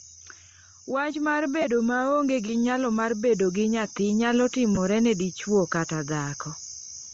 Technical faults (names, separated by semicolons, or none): Bluetooth LC3 compression; microphone volume stepped up; lost LE Audio frames